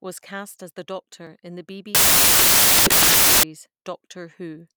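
From 1.95 s to 3.43 s, right after "in the", the speech gives way to loud, harsh broadband noise: samples built from the wrong bytes. The decoder misassembles each sample, so the rapidly fluctuating low-order bits land in the high-order positions and dominate the value. On a waveform the segment becomes a dense block; a spectrogram shows energy spread broadly across frequencies for those 1.49 s.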